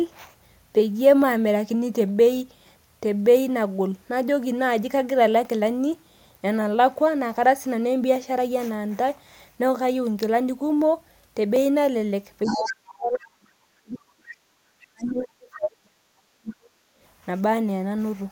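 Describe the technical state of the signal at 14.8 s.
Other side's voice leaking through from 14.80 to 14.85 s: a faint scrap of a second voice roughly 30 dB below the speech, likely residual loudspeaker echo the canceller missed. Speech suppressed in double talk follows from 14.86 to 16.72 s, with the talker's voice dipping by as much as roughly 40 dB, likely because the canceller could not separate talker from echo and turned both down.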